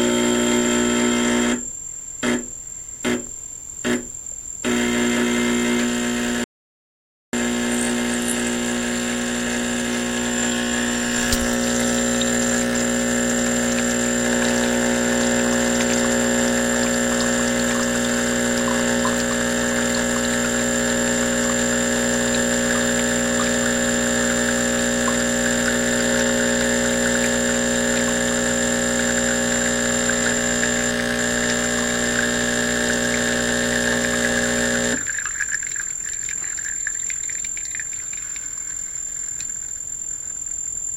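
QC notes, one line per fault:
6.44–7.33 s, audio dropout to silence: the input signal was cut off for about 0.89 s, likely through a momentary disconnection or mute upstream of the recorder, which kept writing silence for the duration. The sound stops abruptly mid-flow and resumes just as abruptly, and the gap is silent with no room tone or noise floor beneath it, so whatever occurred in that interval is lost rather than merely quiet.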